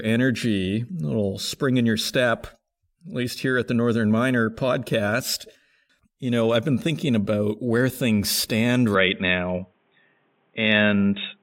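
The recording input was likely switched to a poorer device at 8.95 s in this speech clip, and it stays on that device through the end at 11.43 s. From there the audio is narrowband, with nothing above 3.8 kHz, so it turns dull and boxy. A faint new noise floor, roughly 45 dB down, comes in. The level barely changes, and there's no gap at the switch.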